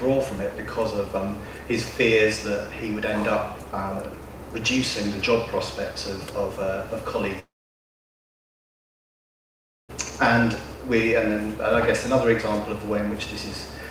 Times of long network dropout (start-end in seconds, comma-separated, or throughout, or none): 7.39-9.91